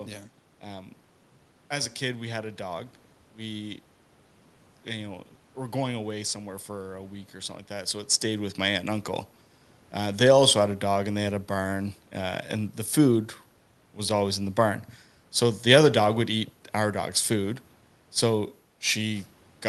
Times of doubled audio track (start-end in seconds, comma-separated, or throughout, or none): none